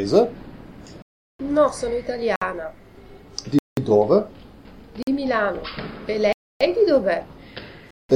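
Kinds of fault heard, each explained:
Block of digital silence: the sound drops to silence with no fade at 1.02, 2.36, 3.59, 5.03, 6.33 and 7.91 s, for 47 to 372 ms, likely from unfilled output buffers. Waveforms show flat lines, spectrograms blank columns edged by vertical streaks.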